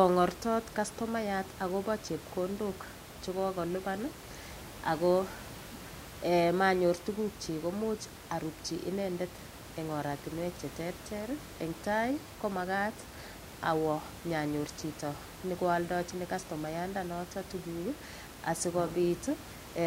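Nothing goes wrong technically in this speech recording; the only thing in the background is a bit of room noise sitting about 15 dB under the speech, which is just part of where it was recorded.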